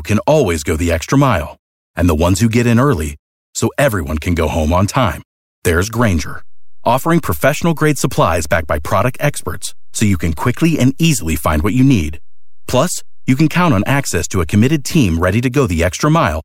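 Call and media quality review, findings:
DC step at 6.00 s, stepping back at 14.98 s. A low thump at each edge while the speech continues unchanged. The waveform's zero line shifts by about -24 dBFS, holds for roughly 9 s, then returns. Probable component: converter recalibration, or an input stage with a DC offset switched into the path and later removed.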